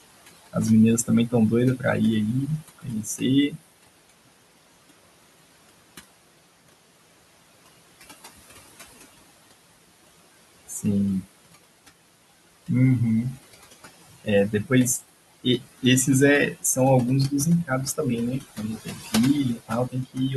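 From the start, overdone noise removal is at work. The room noise, sitting about 17 dB below the speech, is cut so hard that pauses fall to near silence with twinkling specks. A spectrogram shows black gaps with isolated flickering bins.

Throughout, noise suppressor artifacts add to this. Band by band and frame by frame, the suppressor lowers the steady noise by about 20 dB. The noise sinks between phrases and swells back underneath them. On a spectrogram the noise floor pumps in step with the speech.

Speech cut by the noise suppressor appears at 0.01–1.85, 2.47–4.33, 5.69–6.73, 7.66–9.53, 10.68–11.89, 13.36–15.84 and 17.3–20.34 s. The suppressor mistakes soft consonants and word endings for noise and drops them by about 18 to 21 dB, so they sound swallowed. Each span loses anywhere from a brief moment to about a second in total. The waveform shows syllable tails collapsing early, and the spectrogram shows high-frequency energy missing.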